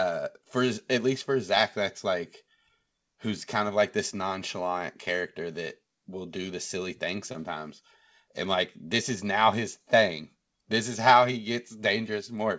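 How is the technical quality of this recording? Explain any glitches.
One brief glitch stands out in the speech. The audio sits on a call path that has nothing above 8 kHz, which fits a G.722 codec at 64 kbps.

Short concealed packet loss occurs at 7.32 to 7.36 s, just after "do the silly thing". About 20 ms of audio arrived too late. The receiver filled the gap by extending the preceding sound, then blended back. It sounds like a quick smear or wobble.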